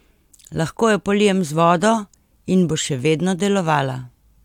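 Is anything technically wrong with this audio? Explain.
No, no technical faults detected.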